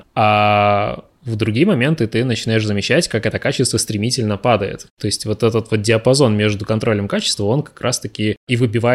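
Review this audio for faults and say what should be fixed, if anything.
Nothing needs fixing, as the signal holds steady with no audible technical faults at any point.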